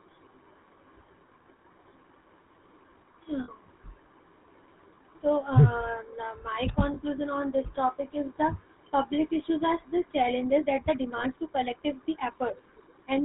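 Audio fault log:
throughout: GSM full-rate codec. The speech passed through the original GSM full-rate coder, which fits about 13 kbps. It rebuilds each sound from a vocal-tract model driven by a sparse, regularly spaced pulse excitation that keeps only a third of the samples, and it discards everything above 4 kHz. The damage is plainly audible: a buzzy, gravelly roughness over the whole clip, a dull top end, and sibilants that lose their sharpness.
3.44–3.50 s, 6.94–6.97 s, 11.18–11.24 s: lost GSM frames. At each of these points the decoder received bad frames and concealed them by repeating the parameters of the last good frame. The gap is about 40 ms at 3.44 s, which fits two 20 ms frames, and about 20 ms at the other two points, which fits a single frame. Each gap is too short to fade to silence, so the sound freezes into a brief, rough, metallic ring before normal decoding returns.
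10.41–13.25 s: time-stretched section. From 10.41 s to the end, the pace suddenly jumps to about 1.41 times normal speed while the pitch stays where it was. This is likely software squeezing the audio to fit a shorter length, keeping pitch by dropping short pieces. Because pieces are cut out rather than the sound simply being played faster, this stretch sounds rushed. The lost frames at 11.18 s fall inside this section.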